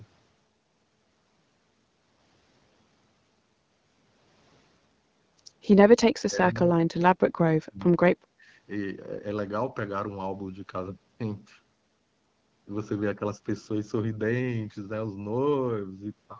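From 6.21 to 8.43 s the speech gets pulled down hard, by about 35 dB at its deepest, likely speech suppressed in double talk as the echo canceller ducks both sides.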